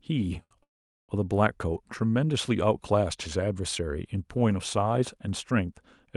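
A short stall from a late packet at 0.43 to 0.53 s in this speech recording holds the last sound about 73 ms too long while the jitter buffer waits, then resumes from where it stopped. A call audio freeze follows at 0.63 to 1.11 s. The sound briefly drags on, then drops to silence for about 430 ms before resuming with nothing lost, likely because delayed packets emptied the jitter buffer.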